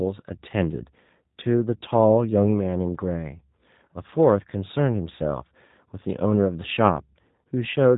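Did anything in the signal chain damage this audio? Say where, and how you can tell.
Yes, at the codec stage: the speech was run through a G.729 codec, which rebuilds each short frame from a vocal-tract filter, a pitch predictor and a few pulses. Throughout, nothing passes above 3.8 kHz and voices sound plainly rough and synthetic, which fits 8 kbit/s G.729A.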